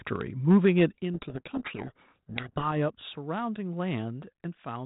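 From 0.5 to 0.85 s the loudest speech peaks turn harsh and crackly. This is microphone overload, likely from input volume set too high. The peaks run about 3 dB past the converter's limit. A few percent of samples have their tops flattened.

At 1.02 s the level drops abruptly, by about 7 dB. Speech and background fall together. This is a microphone volume step-down, likely the call software reacting to that clipped passage by cutting the device's input gain in one move.

From 1.14 to 2.69 s the speech is buried in harsh, grinding distortion. This is a codec payload misread. The 32 kbit/s G.726 stream is decoded with its code words in the wrong bit order. The decoder then rebuilds garbage from each sample's difference value. The audio stays limited to below 4 kHz throughout.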